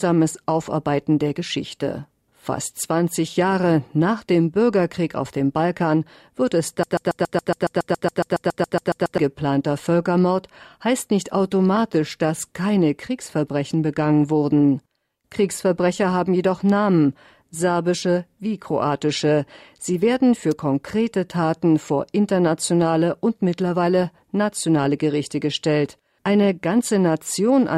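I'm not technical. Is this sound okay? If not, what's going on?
No. From 6.83 to 9.18 s the sound gets stuck: a tiny piece, only about 0.14 seconds long, plays over and over, 17 times in a row. This is a broken-record loop. The player or stream likely stalled and kept re-sending the last scrap it had, so whatever should have been heard in those two-odd seconds is simply gone.

At 20.51 s there is a sharp snap, a brief crack sitting on top of the sound that is over almost instantly. This is an electrical switching spike. Something nearby, likely a switch flipping, a motor kicking in or a spark of static, sent a tiny jolt of electricity into the audio cable, and the recording captured it as that click.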